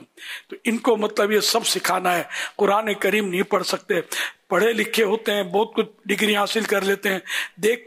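From 4.13 s to the end at 7.86 s, a fine hiss and grainy roughness rides on the sound. It swells on loud, bright passages and disappears in the quiet gaps. This is sample clock jitter. The converter's timing wanders by a few microseconds, so each sample lands slightly early or late. On steep waveform slopes that timing slip becomes an amplitude error, here sitting roughly 30 dB below the signal.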